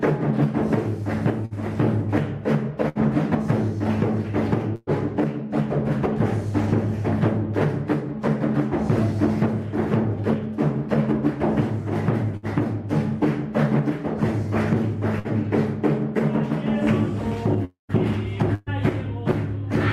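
Bursts of packet loss hit at 1.45, 2.89, 4.75, 12.37, 15.19 and 18.55 s. Each time, a short run of audio never arrived. The receiver stretched the last sound into a brief held buzz or hiss that fades. Most gaps last about 60 ms. Those at 4.75 and 18.55 s run nearer 120 ms, and the first ends in a moment of silence. Each time the sound jumps ahead.

At 17.65 s a longer gap begins, lasting until 17.92 s. The last sound is drawn out and fades, then there is about 130 ms of silence. This is likely a long network dropout, with roughly a quarter second of audio lost.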